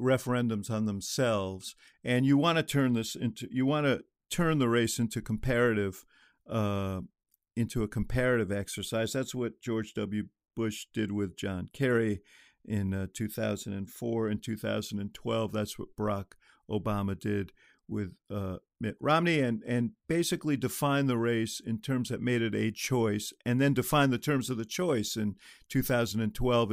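Nothing in the speech recording stood out as a technical problem on listening.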